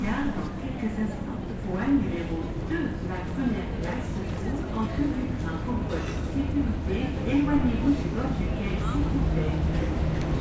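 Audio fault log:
No faults heard in this sound recording.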